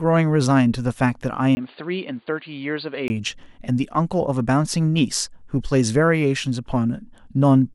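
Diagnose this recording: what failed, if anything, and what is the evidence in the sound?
At the capture stage, between 1.55 and 3.1 s, the speech turns dull and boxy, a few dB quieter and over a new, faint noise floor, then clears again. A 20 ms gap of silence marks the first switch. Most likely the input switched to a poorer device, such as a headset's call profile with a narrow band, and later switched back. On a spectrogram, everything above 4.7 kHz vanishes for that span; the waveform shows the dropout and a lower envelope.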